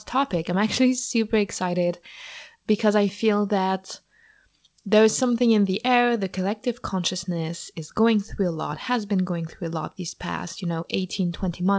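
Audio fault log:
No faults are present in this speech clip. It has passed through a WebRTC call path with nothing above 8 kHz, which points to a wideband codec such as G.722.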